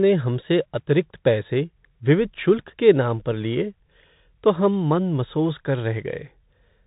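Bluetooth CVSD headset codec, throughout: the one-bit 64 kbps coding cuts everything above 4 kHz, making the speech narrowband with scratchy s sounds and a granular hiss beneath.

Bluetooth headset packet repeated, 0.41 to 0.43 s: about 11.2 ms of audio was replaced by re-decoded copies, which fits three lost packets and gives a brief buzz near 267 Hz.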